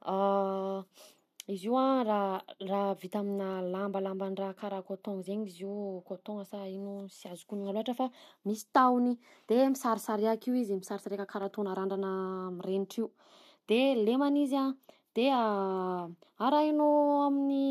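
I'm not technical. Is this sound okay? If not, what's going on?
No. There are two sharp clicks in the speech, at 3.53 seconds and 11.43 seconds. Each is a single tick, over almost instantly. The likely cause is dropped samples: a handful of the tiny measurements that make up digital audio went missing. That gap lasts far less than a millisecond, so nothing you could hear is lost. But the sound wave jumps suddenly from one point to a later one, and that jump is the click.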